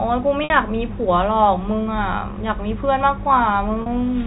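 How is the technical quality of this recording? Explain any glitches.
Two short glitches interrupt this telephone-band speech, which passes through G.711 coding with nothing above 4 kHz. Both are packet loss with pitch repetition. The first runs from 0.44 to 0.50 s, about 60 ms. The second runs from 3.82 to 3.86 s, about 40 ms. Audio packets went missing, and the receiver filled each gap by repeating the last pitch period. That gives a brief, slightly buzzy held tone before the speech resumes.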